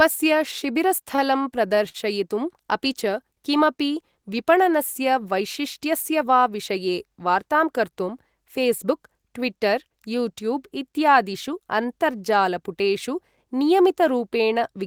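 A speech clip with repeated stalls (stutter) from 1.15 to 1.97 s. Packets arrived too late to keep up. The jitter buffer ran dry five times. Each gap, the longest 52 ms, was bridged by stretching the preceding sound. Nothing is lost, but the speech drags there.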